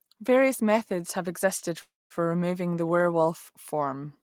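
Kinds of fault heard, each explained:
Call audio freeze: Packets were likely held up in transit, draining the jitter buffer, so from 1.81 to 2.12 s the receiver stretches the last sound into a fading buzz or hiss that drops to silence for about 0.2 s. The speech then resumes where it stopped, running about 0.29 s late with nothing lost.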